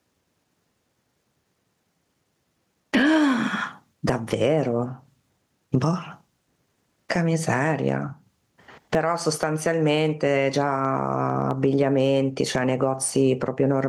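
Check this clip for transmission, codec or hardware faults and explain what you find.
There is one fault, present throughout the speech: gain pumping. The input gain is likely set far too high, so a fast limiter clamps every loud syllable. The gain swings by around 20 dB, leaving a squashed sound with loud and soft parts closer in level.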